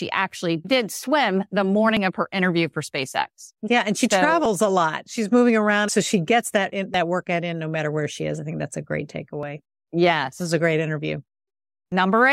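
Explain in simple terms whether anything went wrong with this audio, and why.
Audio missing between chunks causes tiny skips in this speech at 1.97, 4.46, 6.94, 9.43 and 11.92 seconds, about 2.5 seconds apart. Each skip drops about a hundredth of a second. The recorder likely lost that sliver each time it switched to a new chunk.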